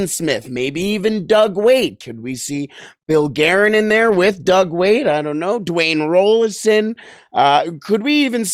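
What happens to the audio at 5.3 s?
Nothing goes wrong at 5.3 s; the speech runs through that moment intact, with no dropout, click or distortion.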